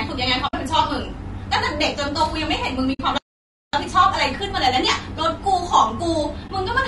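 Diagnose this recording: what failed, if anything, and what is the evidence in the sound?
Codec stage: the speech sounds rough and grainy throughout, with noise between harmonics, likely low-delay AAC compression at a low bitrate near 32 kbps, not network damage.

Network or decoder stage: AAC frame loss with muting leaves soft-faded holes at 0.47–0.54 s, 2.93–3.00 s and 6.47–6.50 s, which sets them apart from hard dropouts.

Playback stage: a playback stall silences the audio from 3.18 to 3.73 s, about half a second. It is far longer than the frame-loss holes, and the sound resumes mid-flow.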